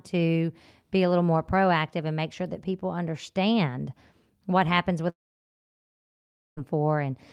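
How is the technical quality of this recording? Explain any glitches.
One real glitch here. Right after "people understand what happens", from about 5.09 to 6.59 s, the audio drops out, most likely from a long network dropout. The last sound smears briefly into a fading buzz, then roughly 1.4 s of near silence, and the speech resumes with about 1.5 s simply gone.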